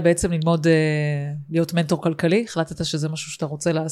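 No technical faults are audible anywhere in the recording.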